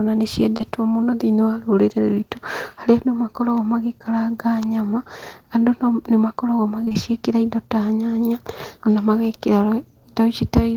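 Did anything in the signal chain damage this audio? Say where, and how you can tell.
Yes. The damage is at the network stage: short concealed packet loss, with 20 ms of audio failing to reach the decoder in time at 0.57 and 0.61 s, and again at 6.85, 6.89 and 6.93 s. These are back-to-back losses, about 70 ms around 0.6 s and about 120 ms near 6.9 s. The receiver patched each hole by extending the preceding speech, then crossfaded back into real audio, leaving a brief smear or wobble where detail went missing.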